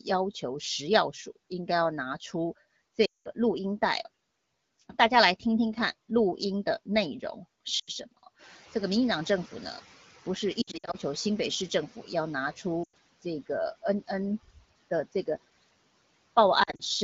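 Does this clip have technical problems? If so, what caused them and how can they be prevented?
Yes. A noise suppressor runs throughout, cutting the noise by about 18 dB, frame by frame, in bands it judges to be steady noise. The background drops away between phrases and returns under the speech. Tuning it to cut less would reduce this pumping.

Lost AMR speech frames, from radio errors that failed the checksum, occur at 3.05–3.28 s, 7.79–7.90 s, 10.61–10.96 s (scattered), 12.83–12.95 s and 16.63–16.82 s (scattered). The wideband decoder repeats the last good settings with falling gain, so the sound smears and sinks toward silence, then returns weak or rough. Better radio coverage or stronger error protection prevents this.

The noise suppressor catching up occurs from 8.38 to 11.89 s. The room noise jumps by about 11 dB around 8.5 s, and the suppressor's noise estimate lags. At first the noise is cut by only about 10 dB, then it sinks as the estimate adapts. 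A faster-adapting noise estimate would shorten this.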